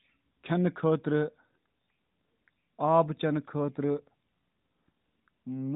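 No technical faults can be heard in the speech, which carries the narrow band-limited sound of the AMR narrowband mobile codec, with nothing passing above about 3.8 kHz and only light coding texture that fits its highest 12.2 kbps mode.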